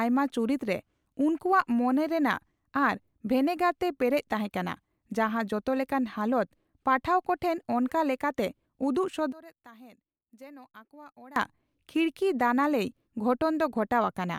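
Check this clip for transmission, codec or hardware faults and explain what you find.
One fault stands out, confined to a two-second stretch near the end.

From 9.32 to 11.36 s the speech suddenly drops by about 22 dB, as if only a faint, distant trace of it remains, before returning to full level. The likely cause is one channel inverted: one stereo channel has flipped polarity, so when the two channels are summed to mono the centred speech they share cancels, leaving only their small differences audible.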